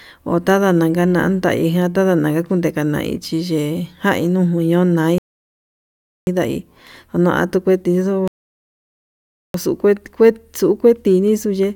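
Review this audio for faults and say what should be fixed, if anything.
Two rebuffering stalls in this speech: silence from 5.18 to 6.27 s (about 1.1 s added), then from 8.28 to 9.54 s, right after "nukue tixuu" (about 1.3 s). The player starved, waited for data, then resumed exactly where it stopped. Fix it with a deeper playback buffer or adaptive bitrate.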